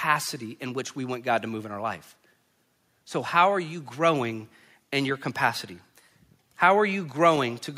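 Nothing stood out on listening to the speech in this clip.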